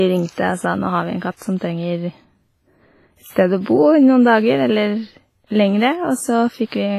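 WMA compression runs through the whole speech recording: heavy transform-codec damage gives a ringing, washy tone and a hiss that breathes with the voice, and nothing survives above 15.4 kHz. This is likely a low-bitrate WMA encode, which fits roughly 24 kbps. Pre-echo appears at 1.58–1.61 s (32 ms), 3.33–3.36 s (31 ms) and 3.61–3.66 s (54 ms). Before each sharp onset a short hiss leads in, because quantisation noise spread across the transform block fills the quiet just before the attack and blurs it.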